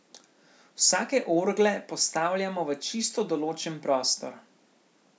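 Nothing in this speech recording stood out as a technical fault on listening.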